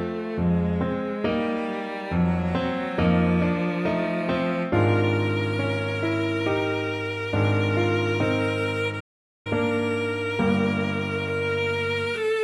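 At 9.00 s the sound cuts off in mid-flow and the output stays silent until 9.47 s, a gap of about 0.45 s, before carrying on. This is a playback stall, most likely the player running short of data or having its output thread blocked until it caught up. On a waveform it shows as an abrupt flat line with no fade at either edge. On a spectrogram it is a clean vertical band empty across all frequencies.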